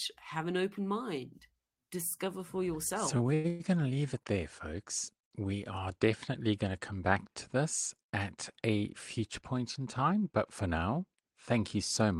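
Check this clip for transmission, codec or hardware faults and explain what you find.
Four separate network and stream faults are audible in this speech recording, spread between about 3 and 11 seconds.

From 3.17 to 3.62 s there is repeated stalling (stutter). Packets reached the receiver late four times in quick succession, and the jitter buffer emptied each time. The receiver extended the last sound to fill about 245 ms in total, over half of that stretch. The longest gap was 117 ms, long enough to be faded. Nothing is lost, but the speech drags and catches.

At 5.25 to 5.33 s a short stall from a late packet holds one sound for 64 ms. A single packet missed its playout time, the buffer ran dry, and the receiver stretched the preceding audio until the packet arrived, then resumed at the same point. It is heard as a brief sustained sound with a faint buzz or dip. The playout delay grows by 64 ms here.

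At 7.79 s there is a single sharp click. Its likely cause is dropped samples, a handful of them covering around a tenth of a millisecond. The waveform jumps straight from one value to a later one. The gap is far too short to remove any speech, so it registers only as a tick, visible as a thin vertical line in a spectrogram.

From 10.14 to 10.76 s a jitter buffer speed-up runs the speech at about 107% of normal rate without changing pitch. The buffer had accumulated more audio than its target, so the receiver trimmed short pitch-period segments repeatedly, removing roughly 50 ms overall. The result is a slightly hurried passage.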